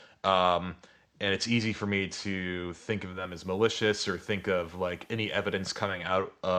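At 3.03 s the speech shifts character. This is digital radio blending to analogue. The receiver lost its digital signal and cross-faded to the FM broadcast of the same station. The blend takes about 0.4 s. A faint hiss rises underneath, roughly 40 dB below the speech. The level drops by about 1 dB. At 6.19 s the receiver blends back to digital. The hiss clears and the level returns.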